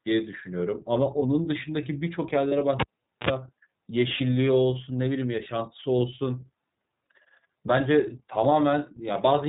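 Throughout the speech, the iLBC codec limits the band to below 4 kHz and gives the voice a slightly rough, synthetic edge. The damage is plainly audible, and the sound fits the 13.33 kbps mode with 30 ms frames, where each frame's excitation is coded on its own.

At 2.48 to 2.53 s, lost iLBC frames leave a gap of about 30 ms, one frame's worth. The decoder fills it by repeating the last pitch cycle mixed with noise, which sounds like a short, buzzy held vowel. The voice is right again almost at once after.

From 2.80 to 3.29 s, the cable is pulled and plugged in. A pop is followed by about 0.44 s of near silence, then a 51 ms burst of 60 Hz mains buzz while only the tip makes contact, and a second pop as the signal comes back.

At 4.16 to 4.21 s, another lost iLBC frame produces the same brief 30 ms buzzy fill before the audio recovers.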